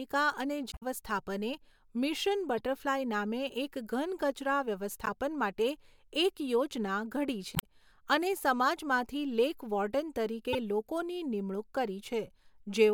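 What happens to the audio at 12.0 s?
At 12.0 s the speech carries on cleanly, with no dropout, click, distortion or other fault at that point.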